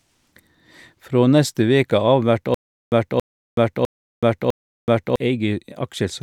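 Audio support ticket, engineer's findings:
Stutter with silent gaps, 2.54 to 5.16 s in the speech. The same 0.28 s burst comes back 4 times, each followed by about 0.38 s of dead digital silence, so roughly every 0.65 s. Likely a stalled player or stream replaying its last buffer on each retry. Audio from that stretch is gone.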